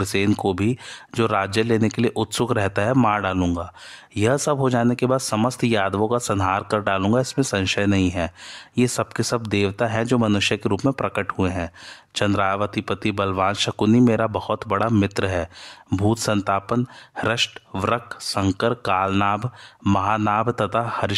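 Speech, with no audible technical faults anywhere.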